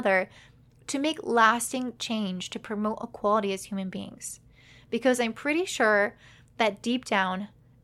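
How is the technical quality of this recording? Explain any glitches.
The technical quality of this recording is good, and there are no glitches to explain.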